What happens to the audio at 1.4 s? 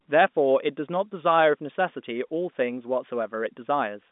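Nothing goes wrong at 1.4 s; the speech continues intact through that moment, carried on the ordinary narrow telephone band, with nothing heard above about 3.8 kHz.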